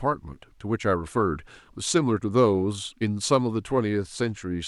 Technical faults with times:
none

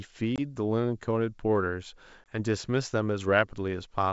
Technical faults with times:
0.36-0.40 packet loss on an ADPCM call
2.24-2.37 packet loss on an ADPCM call

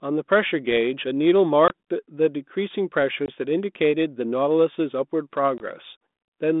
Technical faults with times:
1.68-1.71 packet loss on an ADPCM call
3.26-3.29 packet loss on an ADPCM call
5.58-5.60 packet loss on an ADPCM call

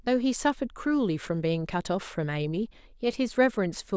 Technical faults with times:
none

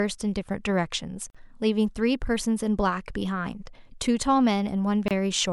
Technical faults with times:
1.30-1.35 gap at a join of encoded pieces
5.08-5.11 gap at a join of encoded pieces

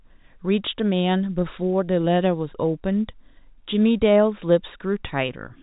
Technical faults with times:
none

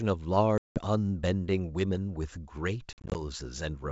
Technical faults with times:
0.58-0.80 packet loss on an ADPCM call
2.93-3.21 packet loss on an ADPCM call

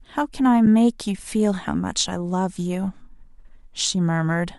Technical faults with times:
0.66 AAC frame loss with muting

